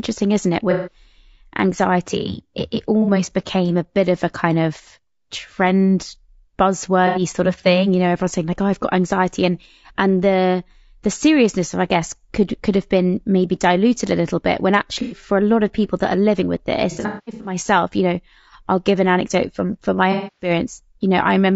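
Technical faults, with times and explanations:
Throughout: low-delay AAC compression. The speech sounds rough and grainy, with noise between harmonics, likely AAC-ELD around 32 kbps. A spectrogram shows smeared harmonics and a synthetic-looking top band.
0.71–0.96 s after "isn't it", 3.02–3.11 s, 7.07–7.21 s before "sort of thing you", 15.02–15.17 s, 16.91–17.56 s between "that are living with" and "you know I'll give", 20.12–20.50 s: AAC frame loss with concealment. The decoder patched the missing audio from earlier spectra, leaving smeared, phasey gaps that show as blurred, flat spectral blocks.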